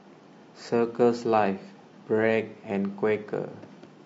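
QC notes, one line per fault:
Throughout, low-delay AAC compression: speech is plainly rough and grainy, with noise between harmonics, likely from short-frame AAC-ELD coding at a rate fitting 32 kbps.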